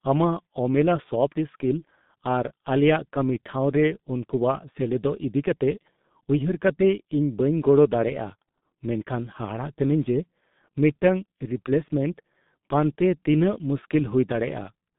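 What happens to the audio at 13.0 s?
At 13.0 s the speech sounds muffled, hoarse and smeared, with blurred consonants. This is G.723.1 codec damage, present throughout the clip. The codec works in 30 ms frames at roughly 6 kbit/s, and cuts everything above about 3.8 kHz.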